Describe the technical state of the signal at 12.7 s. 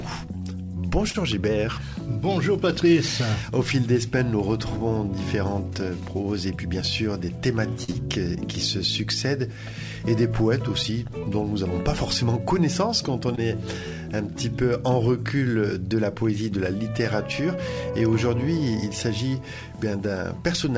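At 12.7 s the signal is intact, with no dropout, glitch or other fault, only the steady band limit of the call path, which leaves nothing above 8 kHz, as it does throughout.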